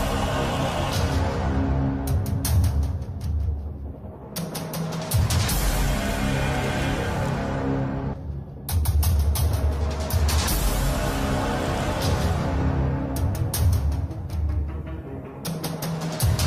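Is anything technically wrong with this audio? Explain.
Yes, there are two problems.

At 8.13 s there's a skip ahead: about a second of audio got dropped while later audio was already queued, so playback jumps straight across with no gap.

From 8.75 to 9.43 s you get a jitter buffer speed-up. The receiver trimmed tiny pitch-period slices, about a tenth of a second in total, so things run roughly 13% fast and sound hurried at the same pitch.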